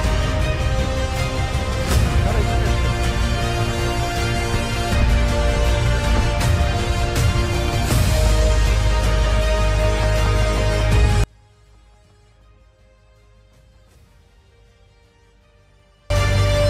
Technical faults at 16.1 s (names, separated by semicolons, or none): audio dropout to a faint residue